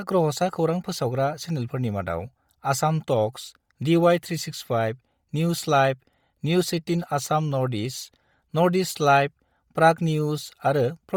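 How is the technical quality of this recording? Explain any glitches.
The recording is compromised by heavy codec damage throughout the speech. The cause is likely Bluetooth LC3 compression. This transform codec works in 10 ms frames and, at a rate that fits about 32 kbps, zeroes much of the upper spectrum and substitutes noise. The result is a breathy, grainy edge on the voice. Nothing is present above 20.4 kHz.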